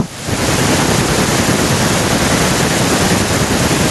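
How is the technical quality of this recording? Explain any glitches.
The recording suffers from gain pumping throughout: the gain swings by roughly 10 dB, bringing loud and soft parts closer in level and leaving the speech squashed, likely from excessive input gain driving a fast limiter.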